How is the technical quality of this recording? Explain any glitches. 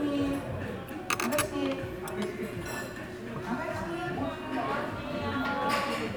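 No glitches or technical faults are audible anywhere in the recording of these sounds.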